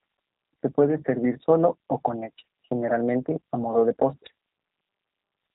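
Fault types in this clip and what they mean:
G.729 codec: Plainly rough, synthetic speech that fits an 8 kbit/s VoIP coder rebuilding each frame from a vocal tract filter, pitch predictor and sparse pulses. A spectrogram shows a hard ceiling with nothing above 3.8 kHz.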